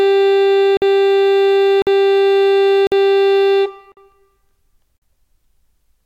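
At 0.77, 1.82, 2.87, 3.92 and 4.97 s, the music stops dead for 50 ms each time, a gap between chunks. The music is carried in 1 s chunks with silence inserted at each join. Unlike a dropout, nothing is skipped: the music resumes exactly where it broke off, at a steady rhythm.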